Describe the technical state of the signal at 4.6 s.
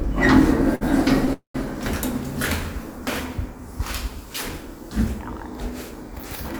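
At 4.6 s the signal is intact, with no dropout, clipping, glitch or other technical fault in the sound at that moment.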